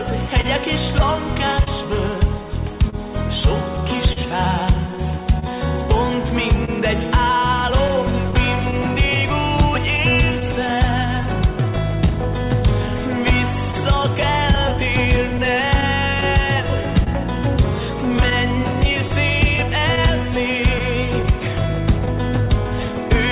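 Throughout the clip there is clock drift between sender and receiver, with the sender's clock running about 2 percent slow. The receiver's buffer keeps draining and is refilled by repeating short pieces, so small timing hiccups recur at uneven intervals and the audio is stretched overall.

From 0.41 s to 22.92 s come scattered short gaps, around forty of them, none longer than about 40 ms, together roughly half a second. Each is patched by continuing the preceding sound, heard as brief ticks, smears or stutters in band-limited audio with nothing above 4 kHz.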